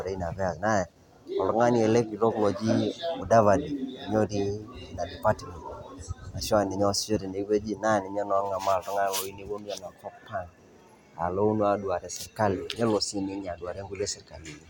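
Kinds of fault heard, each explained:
No technical faults can be heard, with no breaks, distortion or added noise anywhere in the recording.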